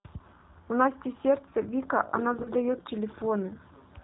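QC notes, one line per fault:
throughout: G.729 codec at 8 kbit/s; nothing above 4 kHz and a rough, synthetic quality from pulse-based excitation, unlike a clean lowpass that only dulls.
2.43–2.50 s: VoIP packet loss concealed by the speech codec; 20 ms, fitting one lost packet, filled with fading extrapolation rather than silence, with weak or distorted sound lingering afterwards.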